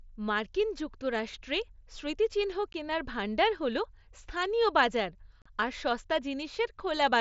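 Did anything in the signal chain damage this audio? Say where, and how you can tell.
Yes. The damage comes from unconcealed Bluetooth headset packet loss on the headset-to-phone radio link. The speech cuts out for 15 ms at 2.73 s, after "মার্কিন যুক্তরাষ্ট্রে স্মৃতিচিহ্ন", and for about 38 ms from 5.42 to 5.46 s, after "ভাণ্ডার হল স্থানীয় বাজার". Both holes start and stop abruptly because the missing packets were filled with silence or an idle pattern.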